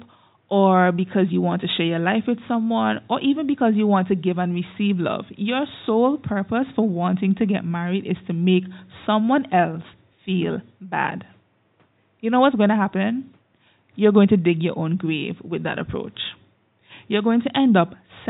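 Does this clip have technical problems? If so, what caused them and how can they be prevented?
No, there are no technical faults in this speech recording; the low room noise, about 45 dB below the speech, belongs to the recording space and needs no prevention.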